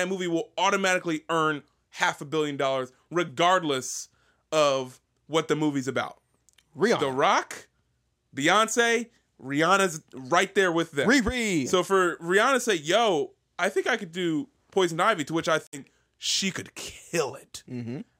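At 15.67 s, just after "to which I", the speech drops to silence for about 0.15 s, resuming at 15.82 s before "she could" as though it had kept playing. This is likely a Bluetooth dropout, where a few audio packets arrived too late and were discarded.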